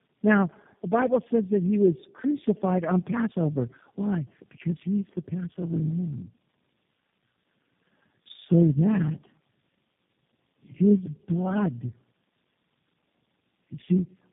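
Tandem speech coding runs through the whole of this speech recording: the call appears to have crossed several network links, each with its own speech codec, so it was decoded and re-encoded at every border, with each coder working on the previous one's damaged output. The sound points to three such coders in a row, consistent with AMR-NB followed twice by G.729A. The result is rough, muffled and warbly speech, with nothing above 3.8 kHz.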